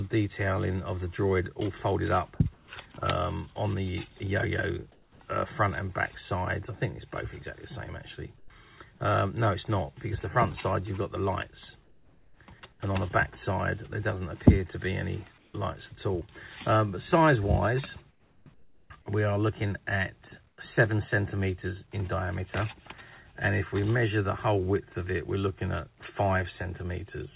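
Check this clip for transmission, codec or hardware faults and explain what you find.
Yes, there are three kinds of fault, all pointing to a voice detector with discontinuous transmission on a call link. The band stops at 4 kHz, which fits a narrowband telephone codec such as G.711.

Sound chopped by the voice detector, 2.36 to 5.2 s: the audio repeatedly drops out, about 480 ms in total. Quiet edges are swapped for flat synthetic noise, so the sound turns choppy. The likely cause is the detector toggling transmission on and off through this stretch.

Comfort noise in place of the background at 8.38 to 8.5 s (120 ms), 11.84 to 12.8 s (640 ms), 15.38 to 15.54 s (160 ms) and 18.1 to 20.58 s (820 ms): the real background gives way to steady, featureless hiss. Where measurable, the real background sits about 34 dB below the loud parts, and this hiss is about 4 dB quieter than it. The receiver is likely generating noise to fill gaps where the sender stopped transmitting.

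Onset clipped by the voice detector, 15.52 to 15.54 s: the first 20 ms of the returning sound are missing and replaced by the filler noise, so it begins abruptly without its soft attack. The likely cause is the detector reacting late when sound resumed.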